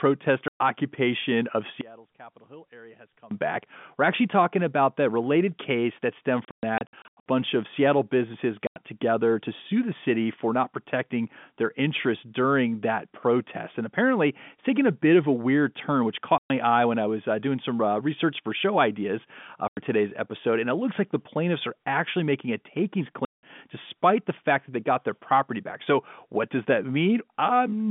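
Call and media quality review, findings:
Packet loss filled with silence: hard-edged dropouts in the speech at 0.48 s (120 ms), 6.45 to 7.26 s (420 ms of holes scattered over 810 ms, longest run 120 ms), 8.67 s (90 ms), 16.38 s (120 ms), 19.68 s (90 ms) and 23.25 s (180 ms). Receiver is inserting digital silence for missing packets. Gap lengths are all multiples of 30 ms, which fits 30 ms packets. Unlike a level fade, the audio cuts to silence and returns abruptly, and the narrow 150 Hz to 3.5 kHz G.711 line band carries through intact either side.

One channel inverted: from 1.81 to 3.31 s the speech sinks by about 24 dB to a faint residue, then returns at full level. Likely cause is a polarity flip on one stereo channel, cancelling the centred content when the channels are summed to mono. Unlike a dropout, sound never stops entirely and a faint remnant remains.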